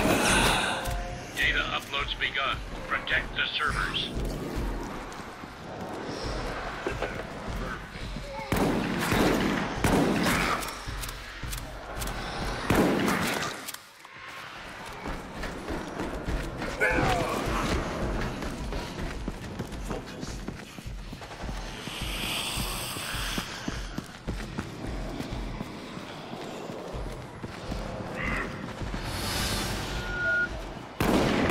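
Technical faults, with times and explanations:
29.85 to 30.49 s, loudspeaker feedback squeal: a 1.4 kHz tone swells over about 0.4 s to roughly 5 dB above the audio as the microphone-to-speaker loop gain passes unity.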